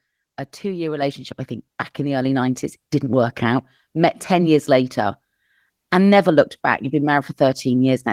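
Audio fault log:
1.02 s, microphone volume stepped up: between "a two year" and "I think back in", the speech and the background noise behind it jump up in loudness together by about 5 dB and stay there. Because both rise at exactly the same instant, the change comes from the input gain, not the talker. The call software judged the microphone too quiet and raised the device's input volume in a single step.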